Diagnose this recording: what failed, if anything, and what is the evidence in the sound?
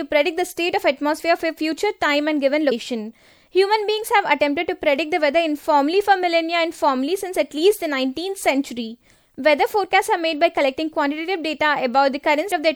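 Compressed frames skipped at the codec stage, at 2.71 s and again at 12.5 s. At each point the speech lurches forward, losing around five frames, about 150 ms of audio at a 26.1 ms frame length, with only a soft smeared blip at the join. That tells it apart from a buffer underrun or network dropout, which leaves a silent gap or a hard click. Here, overlapping frames blur the seam while the timeline simply jumps ahead.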